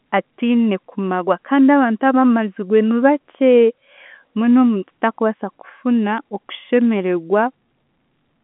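No technical faults can be heard.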